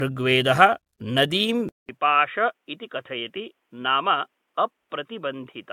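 Throughout this speech clip the sound is swirly and hollow, with smeared, blurred attacks and a watery haze that seems worse than a reasonably high bitrate should produce. That character is likely generation loss: the audio appears to have been decoded and re-encoded about seven times with AAC-LC, at a rate that points to something around 96 kbit/s. Each pass quantises again on a shifted frame grid, so noise and spectral gaps pile up. At 1.69 s a silence of 200 ms cuts in, and from there to the end the speech comes back duller and boxier, about 5 dB quieter, with nothing above 3.8 kHz and a new noise floor roughly 50 dB below the signal. This points to an input switched to a poorer device, likely a second microphone or a headset call profile, whose narrower band, different tone and own background noise take over from that moment.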